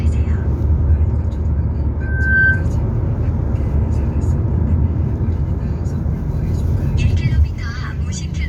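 A recording of everyday sound that, from 2.01 to 2.66 s, swells within about 0.4 s into a piercing 1.6 kHz tone, peaking about 5 dB above the surrounding audio. This is loudspeaker feedback squeal: the microphone re-captured its own loudspeaker, and the loop gain exceeded one at that frequency.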